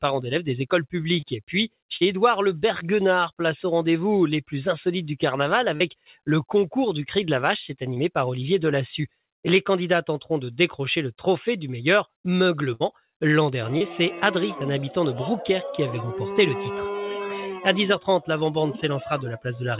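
You're hearing audio carried over a call path; nothing above 4 kHz comes through, which fits narrowband G.711 mu-law at 64 kbps. There's short concealed packet loss at 1.2, 1.96–2.05, 5.76–5.82, 7.94–7.98 and 13.78–13.82 s: each time 20 to 40 ms of audio didn't arrive in time, and the receiver patched the hole by stretching the preceding sound before blending back, giving quick smears or wobbles. Right after, between 5.97 and 6.27 s, there's sound cut by the noise suppressor, which mistook it for noise and pulled its level down by up to about 14 dB for roughly a fifth of a second, so it sinks in level. At 12.74–12.82 s a burst of packet loss drops about 60 ms in one go; the receiver holds the last sound and fades it, then the audio picks up further on with that stretch gone.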